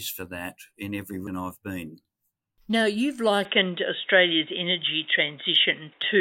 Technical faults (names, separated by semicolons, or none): CD skip; input switched to a poorer device